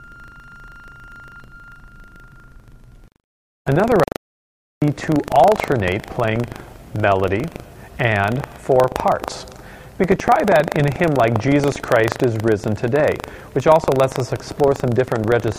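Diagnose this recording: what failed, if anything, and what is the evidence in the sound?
The driver or buffer stage has lost sync: the application writing the ring buffer and the hardware reading it have drifted so that they cross inside every period. The result is buffer tearing, a robotic buzz at 25 Hz running through the whole recording wherever there is signal. A 25 Hz repeat points to a period of about 40 ms. In each period, a small sliver, around 3 percent, carries audio from about 150 ms earlier, spliced in with hard edges on both sides.

The input to the recorder or encoder was most likely lost between 4.04 s and 4.82 s, through a disconnected device, a failed link or a stray mute, and silence was written in its place. This shows up as an audio dropout to silence: the sound cuts off mid-flow at 4.04 s and resumes abruptly at 4.82 s. The gap is completely silent with no room tone, and about 0.78 s of material is missing.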